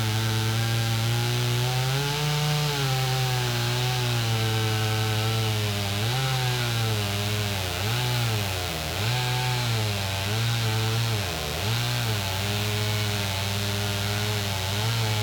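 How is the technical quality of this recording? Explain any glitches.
The recording is marred by one clear fault. Mains buzz runs throughout. Switching spikes from 60 Hz power leak in, producing a harsh, raspy buzz about 10 dB below the sound.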